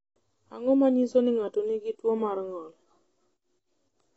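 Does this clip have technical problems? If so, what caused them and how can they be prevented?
Yes. Throughout, the speech sounds dull and warbly with nothing above 7.9 kHz, likely from AAC compression at a low bitrate. Unlike a plain low-pass filter, the sibilants also smear and fizz. Prevent it by encoding at a higher bitrate.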